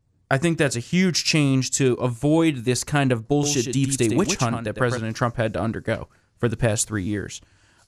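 From 3.43 s to 4.97 s, just after "avoid this kind of", the speech carries a doubled audio track. A second full-band copy trails the original by roughly a tenth of a second at about 5 dB lower, with no decay or room colouring, so it reads as a flat slapback rather than reverb. It switches on and off abruptly at both ends. The likely cause is the signal being captured again through a slower path and mixed back in.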